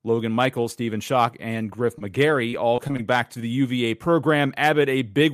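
Speech with scattered short gaps from 1.27 to 3.39 s: around seven lost or late packets, each patched by extending the last sound, heard as brief ticks and smears rather than one sustained dropout.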